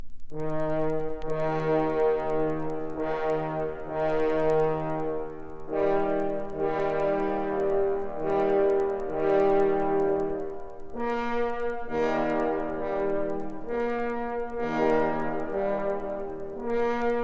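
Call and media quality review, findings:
Resampler restarted on every block: steady ticking at 10 Hz, start to end, only while there's signal. Looks like each block gets converted in isolation, so every edge picks up a small error. The spacing fits 100 ms blocks, likely a 48 kHz to 16 kHz downsample.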